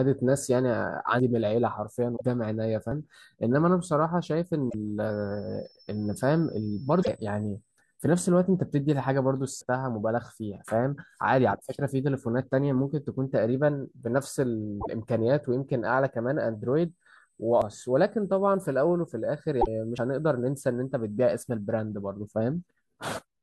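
A speech clip with two kinds of fault. Five abrupt jumps cut into the speech at 1.20, 2.92, 9.61, 17.62 and 19.98 s. Each comes with no gap of silence, and the speech simply lands further along. The jumps at 1.20, 2.92 and 19.98 s skip roughly a tenth of a second. Those at 9.61 and 17.62 s skip roughly a third of a second. This is likely a dropped buffer (overrun): the hardware overwrote audio before the software collected it, and the two sides were joined. Five short squawks or blips are damaged data in a compressed stream. They fall at 2.13–2.21, 4.66–4.75, 6.99–7.09, 14.77–14.87 and 19.58–19.68 s. Each lasts under a tenth of a second. Corrupt bytes made the decoder misread frames and lose sync. It then hunted for the next valid frame header.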